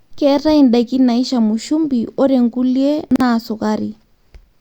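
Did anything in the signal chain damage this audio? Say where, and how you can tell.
Yes. At 3.11 to 3.20 s the speech briefly jumbles, with a short stretch of sound heard in the wrong order. This is chunks out of order, arising in the driver or buffer stage. One block of about 46 ms was written one chunk late, so it plays after the block meant to follow it. Nothing is missing, but the swap leaves three hard joins.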